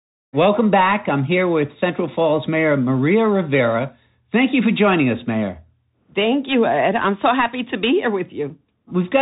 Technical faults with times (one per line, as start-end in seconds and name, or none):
0.00-9.22 Bluetooth CVSD headset codec